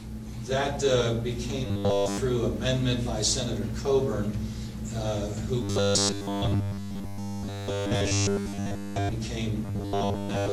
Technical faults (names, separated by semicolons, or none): robotic sound from repeated short buffers